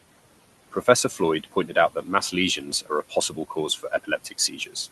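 Throughout the speech, the background sinks between phrases and swells back under them. These are noise suppressor artifacts: the suppressor pulls the steady room noise, which sits about 18 dB below the speech, down by about 17 dB frame by frame. Parts of the speech also sound swallowed or faint at 1.44–1.76 s, 2.65–2.91 s, 3.09–3.57 s and 3.78–4.76 s. This is speech cut by the noise suppressor, which mistook soft speech energy for noise and dropped it by about 13 to 15 dB, for roughly a tenth of a second in each of the first three spans and about a third of a second in the last.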